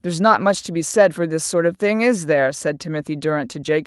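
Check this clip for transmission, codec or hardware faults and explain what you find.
No faults turn up when checking this clip, so there is nothing to explain.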